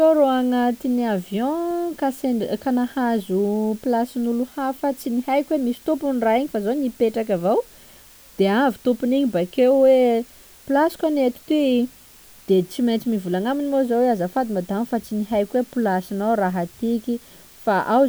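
A steady, even hiss sits under the speech from start to finish, around 30 dB below it, with no grit or crunch added to the speech. The hiss comes from low bit depth with dither: the audio was stored with only 7 bits, and a small random signal was added before each sample was rounded. That randomness breaks the link between rounding error and the signal, so the error becomes constant white noise instead of distortion.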